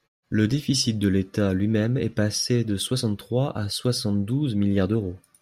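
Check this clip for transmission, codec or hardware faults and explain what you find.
No transmission, codec or hardware faults turn up anywhere in the clip.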